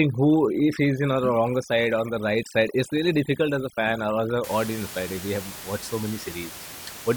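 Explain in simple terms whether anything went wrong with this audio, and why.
Overdone noise removal affects the first 4.44 seconds. A cleanup tool was set too strong. It shut off parts of the sound it mistook for noise, and quiet parts of the speech went too. The background drops and breaks up into twinkling specks. After 4.44 seconds, the ordinary room noise returns, sitting well below the speech.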